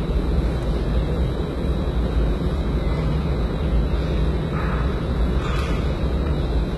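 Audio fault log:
throughout, HE-AAC compression: the top end sounds gritty and metallic, with upper detail that doesn't match the body below it and nothing above 11.8 kHz. The damage is heavy and likely comes from HE-AAC at a very low bitrate, which fits about 16 kbps. This codec codes only the lower spectrum and fakes the treble by copying lower bands upward under a coarse envelope, so the harmonics don't line up.
0.63 s, bit error spike: a single sharp tick, spread across the whole spectrum and unrelated to the surrounding sound. One sample's value jumped by a power of two and immediately returned, as happens when a single bit flips in memory or on a digital link.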